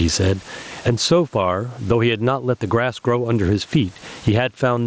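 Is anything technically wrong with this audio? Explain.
Yes. Throughout the clip there is gain pumping. The likely cause is an input gain set far too high for the microphone, with a fast limiter or compressor repeatedly pulling the level back down whenever the speech gets loud. That control swings the gain by around 20 dB. Loud and quiet passages end up squeezed close together in level, giving a flattened, squashed quality. The room noise is about 43 dB below the speech, and the speech arrives through a Bluetooth mSBC headset link that carries nothing above 8 kHz.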